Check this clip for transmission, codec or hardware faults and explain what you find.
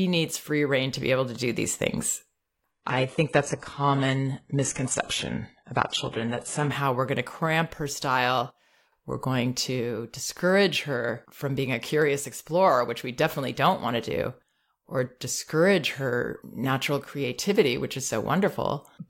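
One fault. From 2.71 to 6.71 s the speech abruptly turns dull, with nothing above 11.5 kHz and no gap: an adaptive stream dropping to a lower bitrate.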